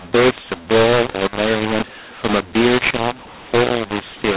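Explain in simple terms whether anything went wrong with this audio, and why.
Audio encoded as A-law was decoded as mu-law, a mu-law and A-law mix-up, so the speech sounds harsh and distorted throughout, with noise filling the pauses.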